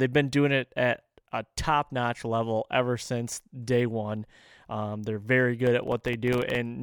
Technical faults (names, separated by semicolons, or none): processor overload crackle